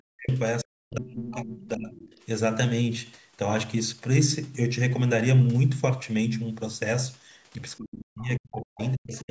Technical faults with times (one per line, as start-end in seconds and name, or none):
0.00-0.30 speech suppressed in double talk
0.62-1.98 speech suppressed in double talk
1.60-1.68 other side's voice leaking through
1.99-2.21 other side's voice leaking through
7.77-9.30 speech suppressed in double talk
8.19-8.27 other side's voice leaking through
8.56-8.94 other side's voice leaking through